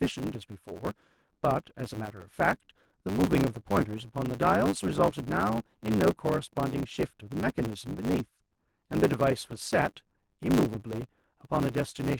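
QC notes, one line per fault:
Throughout, block size mismatch (truncated): the speech carries a steady buzz at 100 Hz and runs about 1.16 times fast while keeping its normal timbre. One stage is passing longer blocks than the next stage takes in, which fits 512-sample blocks written and smaller ones read. The tail of every block is dropped, so each discontinuity produces the buzz at the block rate, and the lost samples shorten the timeline without any resampling.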